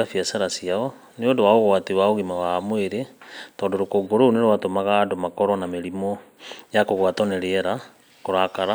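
From 4.06 to 6.37 s, channel delay causes comb filtering. One channel lags about 0.1 ms, cutting a notch near 5 kHz that shows as a dark spectrogram band, and the speech sounds hollow and phasey.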